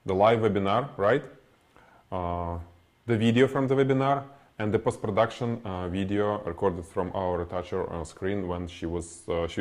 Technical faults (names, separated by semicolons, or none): none